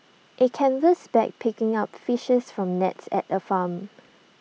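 No technical faults can be heard anywhere in the recording.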